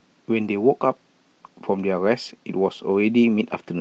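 Packets were lost from the Opus stream at 0.43 to 0.49 s, which fits two separate packets, and at 2.29 to 2.31 s, likely one. Each is a lost packet rebuilt from error correction: the decoder played lower-bitrate copies from the following packets, so there is no gap. Those brief stretches sound rougher and noisier within the call path's 8 kHz band.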